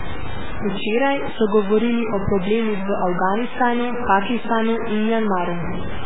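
From start to finish the speech carries a coarse, gritty distortion that tracks the signal, with quiet stretches breaking up and sputtering rather than fading smoothly. The error sits only around 10 dB below the speech. This is likely low bit depth without dither: the sound fits about 4-bit truncation, where samples are simply cut to a handful of steps and the rounding error stays locked to the waveform.

Also present for the whole clip is heavy codec damage: a watery, swirling quality, smeared consonant onsets, and metallic chirping on sibilants. Nothing remains above 3.8 kHz, giving a dull, band-limited top end. The likely cause is MP3 compression at a very low bitrate, consistent with about 8 kbps, where the encoder drops weak frequency lines that flicker on and off between frames and cuts the treble at a fixed point.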